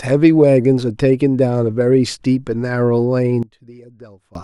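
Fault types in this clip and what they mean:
One channel inverted: from 3.43 s to 4.35 s the speech drops by about 20 dB to a faint residue, as the content common to both channels cancels when they are combined to mono. The likely cause is reversed polarity on one stereo channel.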